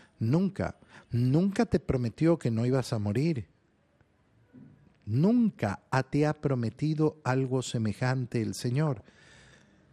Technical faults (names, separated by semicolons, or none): MP2 compression; DAB burbling